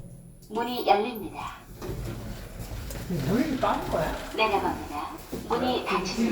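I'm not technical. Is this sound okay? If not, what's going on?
No, at 2.83 s and 3.82 s the sound jumps ahead slightly, likely a dropped buffer (overrun) losing a few hundredths of a second each time.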